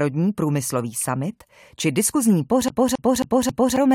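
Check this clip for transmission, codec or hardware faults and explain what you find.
One fault is present: a CD stuck on one turn. From 2.68 s to 3.76 s, right after "průmyslový summit či diskuzní", the same 0.27 s fragment of speech repeats four times in an even stutter, with brief mutes between repeats. A scratch keeps knocking the laser back one track on each rotation.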